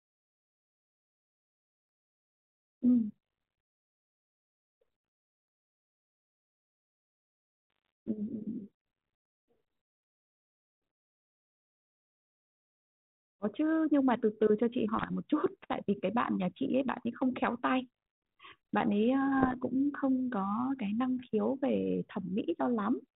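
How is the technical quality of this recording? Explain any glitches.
Three short bursts of bit errors on an ADPCM link mark the recording, at 7.70–7.89 s, 14.97–15.10 s and 19.40–19.55 s. Flipped bits corrupt the transmitted difference codes, and the decoder's adaptive step size and predictor are thrown off with them, so each hit keeps ringing for several milliseconds. The result is pops and rough, gritty bursts with brief jumps in level. The last, at 19.4 s, points to an error rate near one percent. The speech itself comes through 32 kbit/s G.726, limited below 4 kHz.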